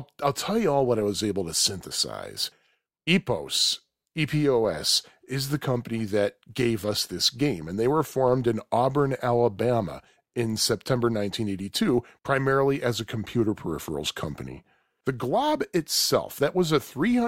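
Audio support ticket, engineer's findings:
Buzz at 100 Hz riding under the speech for the whole clip, louder on loud syllables and dropping away in the gaps. Looks like a filter restarted on every block: it's losing its state at each boundary and starting again from zero, so every block opens with a little transient. Ticks every 10 ms, which points to a 10 ms processing block. Probable component is a filter stage in the block-based chain not carrying its history across calls.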